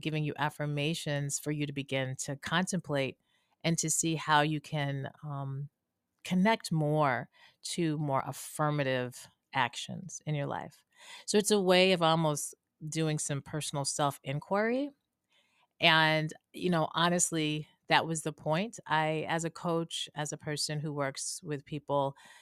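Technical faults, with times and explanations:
8.20 s, overlap between stream segments: a tiny skip in the speech where roughly 9 ms of sound drops out and the waveform jumps straight across the gap. The timing fits a join between 2-second stream segments whose time stamps overlapped slightly. The player treated those milliseconds as duplicated and discarded them, though the audio there was not actually repeated. So real sound was lost, and the abrupt discontinuity is heard as the skip.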